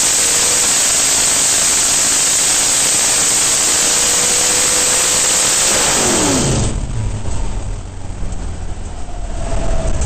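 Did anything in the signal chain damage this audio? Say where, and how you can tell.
No, nothing in the signal chain damaged this audio.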